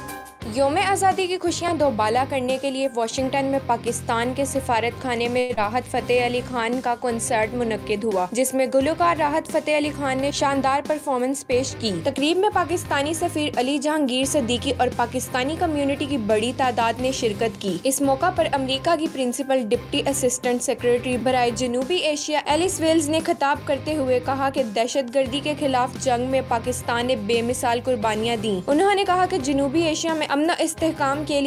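At 5.39 s the sound breaks for about 0.19 s, which points to a long network dropout as the likely cause. The receiver carries the last sound on as a fading buzz or hiss for about 175 ms, and roughly 100 ms of audio is simply gone when playback resumes.

Right after, from 5.95 to 6.89 s, there's a jitter buffer slow-down. The receiver is rebuilding its reserve by repeating pitch periods, adding 74 ms, so the audio plays at 93% speed at the same pitch and sounds a bit drawn out.

Then from 10.58 to 12.58 s the jitter buffer speed-up kicks in. Too much audio has piled up, so the receiver snips out short pitch-period pieces, roughly a tenth of a second in total, and things run at 104% speed.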